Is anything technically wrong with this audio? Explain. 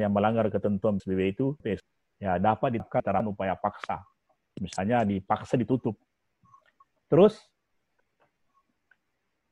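Yes. There are three short spans of chunks out of order, at 1.0 to 1.8 s, 2.8 to 3.2 s and 7.8 to 8.2 s. The audio moves in 200 ms chunks. In the first span, one chunk arrives three chunks late. In the other two, neighbouring chunks swap places. Nothing is lost. The material just plays in the wrong order. Each span sounds jumbled for a moment.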